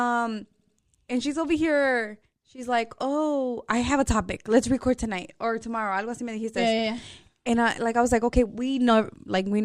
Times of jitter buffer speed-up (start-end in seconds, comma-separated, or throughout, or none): none